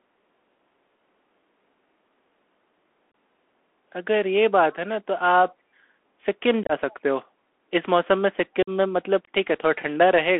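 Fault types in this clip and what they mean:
Bluetooth CVSD headset codec: A 64 kbit/s one-bit delta modulator with adaptive step size, as used on narrowband headset links. Here the speech is band-limited to roughly 250 Hz to 3.4 kHz, with plainly audible granular hiss, scratchy sibilants and slope-overload roughness on loud high-frequency content.
Unconcealed Bluetooth headset packet loss: Short voice packets between headset and phone are dropped and replaced by silence or an idle pattern rather than concealed. Abrupt gaps occur at 3.12 s (about 26 ms), 6.63 to 6.72 s (scattered, roughly 49 ms in total) and 8.63 to 8.69 s (about 49 ms), with hard edges and brief quieting.
Echo leak: A faint delayed copy of the speech, around 30 dB below it and trailing by about 322 ms, appears briefly at 6.9 s. This is likely residual loudspeaker pickup that the far end's echo canceller failed to fully remove.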